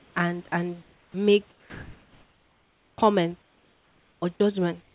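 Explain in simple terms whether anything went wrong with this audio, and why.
Several things went wrong, all tied to a call system that stops sending audio when it thinks nobody is talking.

Comfort noise in place of the background: at 0 to 0.16 s, 0.82 to 1.14 s, 1.5 to 2.98 s and 4.82 s to the end, the real room background is likely swapped for a smooth, even hiss, slightly quieter in most of these spots. Unlike a lost piece of speech, only the pauses change.

Sound dropped by the voice detector: from 0.48 to 0.52 s, a tiny slice of speech vanishes into that same steady hiss, likely because the detector took a quiet bit for background. This differs from comfort noise because actual speech goes missing.

Onset clipped by the voice detector: from 2.95 to 2.98 s, right where the long pause ends, the detector likely notices the speech too late, so the first moment is cut and it begins abruptly. 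Only the start is lost, not a chunk in the middle.

Sound chopped by the voice detector: from 3.42 to 4.4 s, the detector likely flips on and off repeatedly, so quiet parts keep dropping out. The repetition makes it choppy rather than one single gap.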